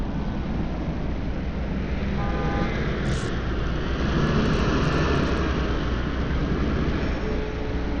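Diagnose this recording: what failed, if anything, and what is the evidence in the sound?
Bluetooth SBC compression, throughout the clip, at the codec stage: the treble flickers and thins, a gritty noise rides on the sound, and nothing is present above 18.2 kHz. The likely cause is a starved SBC bit pool, fitting roughly 80 kbps, leaving upper sub-bands coarsely quantised.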